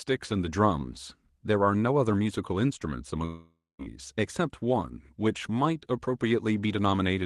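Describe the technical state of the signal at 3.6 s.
At 3.6 s the signal sits inside a long network dropout running from about 3.25 to 3.82 s. For roughly half a second no new audio reaches the receiver, which likely concealed the gap by extending the last sound as a fading buzz before settling into about 220 ms of near-silence. Unlike a brief packet-loss glitch, the concealment runs out, and the audio resumes at 3.82 s with about 540 ms of content simply gone.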